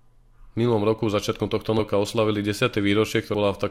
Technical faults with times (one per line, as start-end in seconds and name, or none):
1.78 compressed frames skipped
3.33 compressed frames skipped